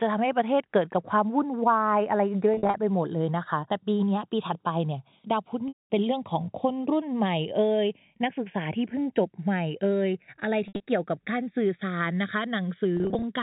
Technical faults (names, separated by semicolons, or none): channels drifting apart; packet loss with pitch repetition